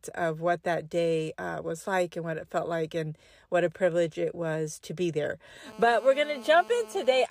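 From 5.66 s to 7.26 s, just after "was to be there", a GSM phone buzz sets in: a hard, raspy drone at about 217 Hz, steady as during a call, sitting about 20 dB below the speech. The audio circuitry is rectifying the handset's radio bursts. A spectrogram shows evenly spaced harmonic lines stacked across the spectrum. The waveform shows a regular pulse train.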